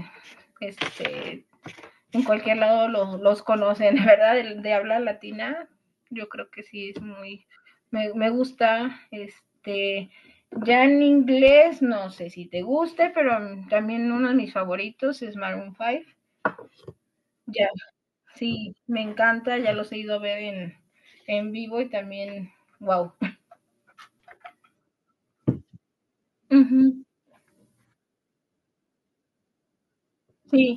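At 11.48 s a single loud pop cuts in over the speech, lasting until about 11.51 s while the talking carries on underneath. It is likely a brief voltage step or pulse entering the signal path, from a plug, a switch, static or a driver glitch. On the waveform it shows as one sharp spike standing a few decibels above the speech peaks. A spectrogram shows a thin vertical stripe of broadband energy spanning the full frequency range.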